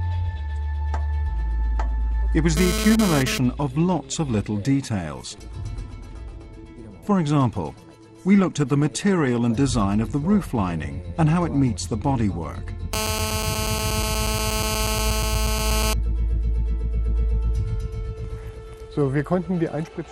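GSM phone buzz, a raspy 217 Hz rattle about 3 dB below the signal, appears briefly at 2.57–3.38 s, then holds steady at 12.93–15.93 s.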